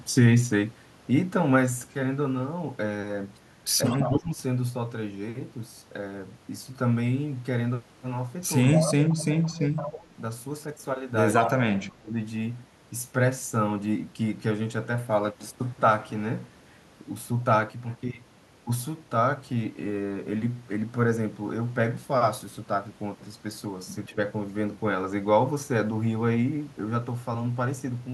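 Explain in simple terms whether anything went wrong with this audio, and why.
Two problems are audible in this speech. An echo leak appears at 3.86–4.15, 8.64–9.14, 9.76–9.82 and 11.38–11.49 s: a copy of the speech returns about 172 ms late, likely because a loudspeaker on the far end fed the microphone and its echo canceller missed it.

Speech suppressed in double talk occurs at 3.87–4.4, 8.8–10.13, 11.4–12.14 and 24.1–24.17 s, where the speech dips or drops out in pieces. This likely happened because both sides spoke together, and the echo canceller turned down its own talker along with the echo.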